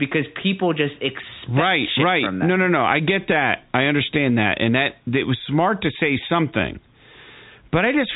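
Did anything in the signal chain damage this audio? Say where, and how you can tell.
No, nothing in the signal chain stood out as damaging this speech on listening, and the telephone-band G.711 coding with no content above about 3.8 kHz is what that path normally sounds like.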